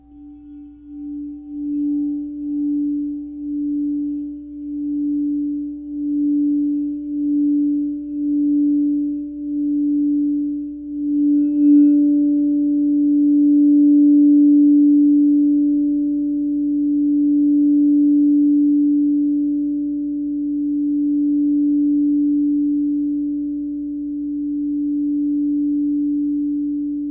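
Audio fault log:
No faults detected; no dropouts, clicks, distortion or level problems found anywhere in the audio.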